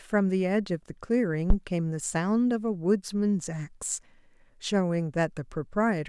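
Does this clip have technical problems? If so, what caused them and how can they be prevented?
Yes. At 1.50 to 1.56 s, phantom power was switched on or off on a live input, and the sudden voltage step passed through the coupling capacitors as a phantom power thump. It is a deep, low-frequency knock in the speech that peaks at about -10 dBFS and dies away within 12 ms. To prevent it, mute the channel or pull the gain down before switching phantom power, and bring it back up only once the supply has settled.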